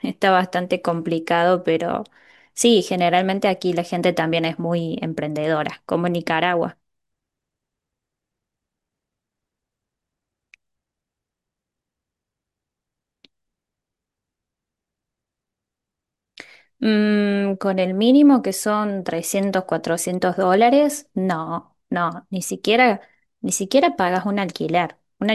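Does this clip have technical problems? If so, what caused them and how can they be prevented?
No, this speech recording has no technical faults, so there is nothing to prevent.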